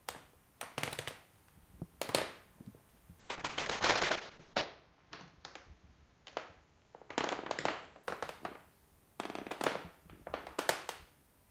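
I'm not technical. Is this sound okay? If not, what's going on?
No. From about 3.22 to 8.09 seconds there is a call bitrate drop. The connection's estimate of how much data it could carry fell sharply, so the system squeezed the audio into far less data. The sound gets rougher and duller, losing its crisp top end as if heard through a wall, and is at its worst for about 1.4 seconds within that stretch before quality returns.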